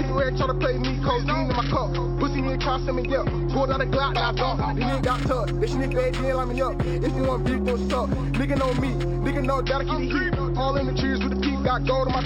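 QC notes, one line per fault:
4.89–9.66 s, imaging from linear upsampling: the top of the band goes dull at 6 kHz, yet a faint metallic shimmer appears between 6 kHz and 12 kHz, roughly 30 dB under the signal. Straight-line interpolation, which fits a jump from 12 kHz to 44.1 kHz, filters weakly, so mirror copies of the spectrum survive above the original band. Plain band-limiting would dull without shimmer, and aliasing folds energy downward rather than mirroring it upward.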